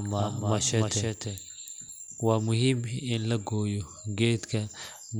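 Until 2.52 s, a doubled audio track. A quieter copy trails about a third of a second behind, likely from a slower path. It stops abruptly.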